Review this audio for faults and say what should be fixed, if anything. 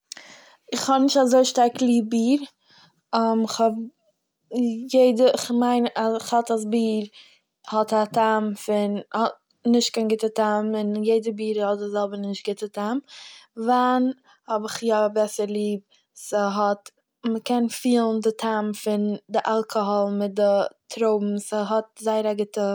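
Nothing in this speech audio needs to be fixed, as there are no faults to review.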